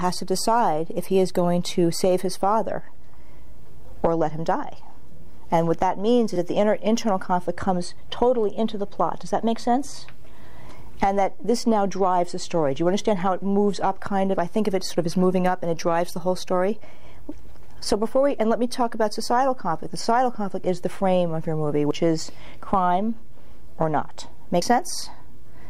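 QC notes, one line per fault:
6.36, 21.91 and 24.62 s: dropped buffer (overrun). Likely the capture software fell behind and the hardware overwrote unread samples, losing roughly 20 ms at the first point and about 40 ms at each later one. The audio skips ahead with no silence.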